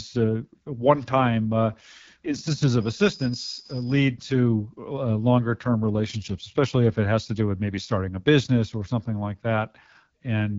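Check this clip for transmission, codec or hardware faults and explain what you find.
One fault runs through the whole clip: AMR wideband (HD Voice) codec coding. From start to finish the speech sounds rough and raspy, with nothing above 7.5 kHz. The codec models the lower band with a pulse-driven vocal tract filter and fills the top with shaped noise. Damage this obvious fits one of its lowest modes, such as 8.85 kbit/s.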